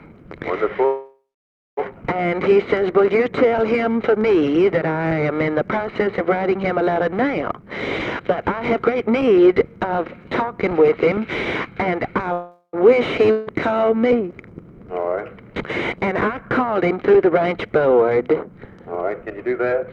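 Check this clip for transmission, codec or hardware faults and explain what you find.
The clip has three kinds of transmission fault: two call audio freezes, three jitter buffer speed-ups and one long network dropout.

Call audio freeze, 0.85 to 1.79 s and 12.33 to 12.75 s. The last sound hangs on as a fading buzz, then goes silent, for about 0.54 s in the first case and 0.08 s in the second, before resuming exactly where it stopped. Nothing is lost, but the clip is pushed later by 0.92 s and then 0.41 s. This is likely packets held up in transit, draining the jitter buffer until they arrived.

Jitter buffer speed-up, 7.51 to 9.61 s, 11.17 to 11.92 s and 18.42 to 19.90 s. The sound rushes forward at unchanged pitch: sharply hurried in the first stretch, at 124% speed, just starting to sound hurried in the second at 105%, and clearly quickened in the third at 113%. The receiver snipped out many tiny pitch-period slices to shed excess buffered delay, roughly half a second, a few hundredths of a second, and about a fifth of a second respectively.

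Long network dropout, 13.31 to 13.49 s. A brief synthetic buzz stands in for the sound, and when the audio returns it has skipped ahead, with about 0.16 s gone for good. The gap is short enough that the concealment never decays to silence. The likely cause is a run of packets that never reached the receiver, so the concealment filled the hole and playback resumed past the lost portion.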